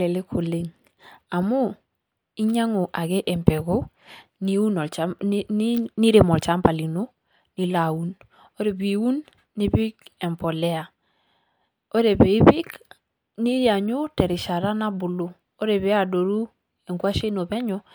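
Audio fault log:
No faults heard anywhere in this recording.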